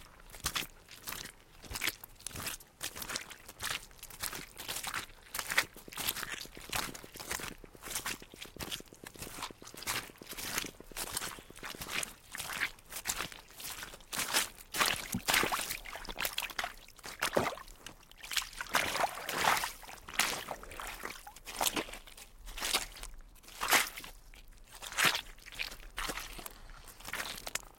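From 5.65 s to 11.88 s, a train of clicks runs over the sound. About fifty near-identical pulses arrive at a steady 8.5 per second, peaking a few dB above the sound itself. Interference from nearby equipment is the likely cause, heard as even ticking.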